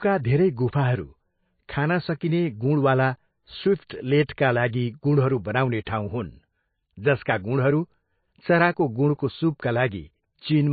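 Throughout, the speech sounds watery and swirly, with nothing above 4.5 kHz, likely from MP3 compression at a bitrate low enough to point to about 24 kbps.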